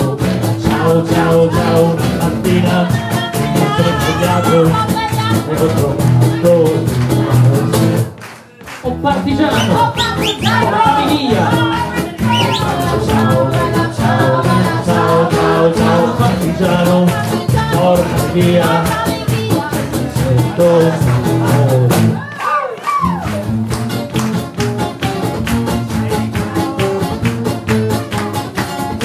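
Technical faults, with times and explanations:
No technical faults found in this clip.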